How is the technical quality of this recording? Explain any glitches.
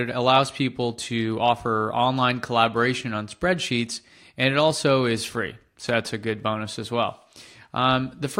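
There's one glitch: CD scratch ticks from 5.39 to 6.57 s. That's eight tiny clicks, the longest roughly 2 ms, where a scratch beat error correction on each disc rotation.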